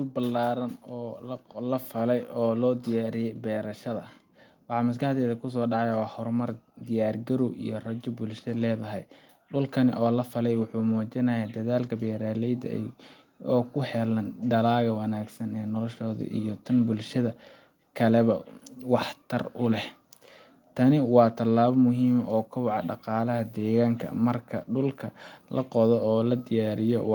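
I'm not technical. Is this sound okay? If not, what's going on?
No. From about 0.9 to 16.6 seconds, the voice and the background noise behind it slowly get louder together, as if someone were turning up the volume. That's automatic gain rising: the recorder judged the sound too quiet and kept gradually boosting everything it picked up.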